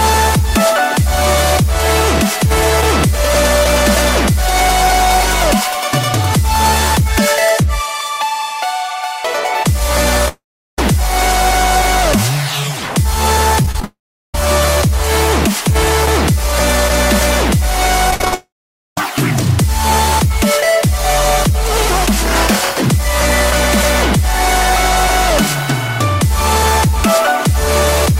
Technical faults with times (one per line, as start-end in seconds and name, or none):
10.28-10.79 long network dropout
13.63-13.84 repeated packet loss (robotic sound)
13.84-14.35 long network dropout
18.11-18.33 repeated packet loss (robotic sound)
18.34-18.98 long network dropout